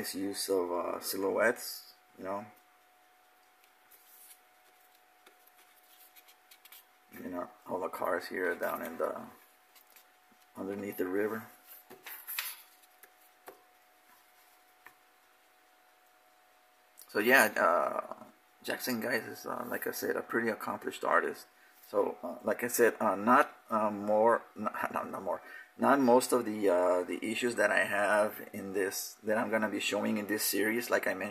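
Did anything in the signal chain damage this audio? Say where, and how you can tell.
No, nothing in the signal chain stood out as damaging this audio when I listened to it.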